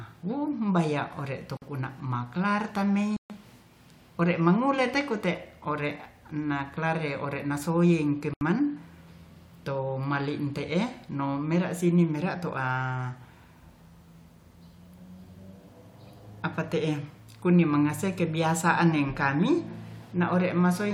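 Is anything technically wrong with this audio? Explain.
Yes. Three Bluetooth stalls, at 1.57 to 1.62 s, 3.17 to 3.30 s and 8.34 to 8.41 s, cut the speech to silence for 48, 133 and 75 ms, likely because delayed packets emptied the headphones' buffer before resumption.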